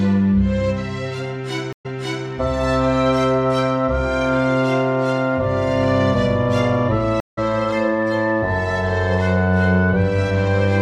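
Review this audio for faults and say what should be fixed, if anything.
Stream reconnects at 1.73–2.27 s and 7.20–7.39 s: the connection dropped, leaving 120 ms and 170 ms of silence, and a fresh decoder resumed mid-stream, first repeating 427 ms of audio, then skipping roughly 150 ms. Buffer more deeply and resume from the exact byte offset.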